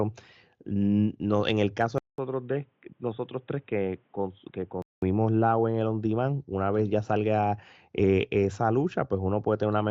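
After a 200 ms gap at 1.98 s, speech turns dull and quieter until 5.02 s, spectrogram empty above 3.8 kHz: likely an input switched to a poorer device.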